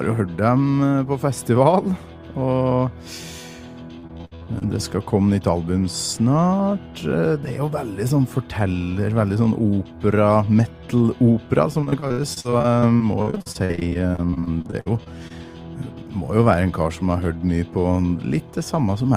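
From 3.99 to 4.66 s, and again from 11.81 to 15.32 s, the audio shows repeated packet loss with a robotic sound. Packets keep going missing, and each hole, up to about 60 ms long, is patched by extending the preceding sound, so it turns choppy and robotic. Concealment fills 44% of the first stretch and 25% of the second. A spectrogram shows smeared, repeated frames and abrupt vertical seams, and the waveform shows frequent splices.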